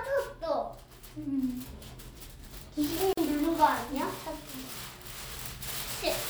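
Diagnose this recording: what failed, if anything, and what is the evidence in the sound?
Codec stage: a gap at a join of encoded pieces, a 44 ms gap at 3.13 s, where separately encoded segments were joined with their encoder delay and padding left untrimmed.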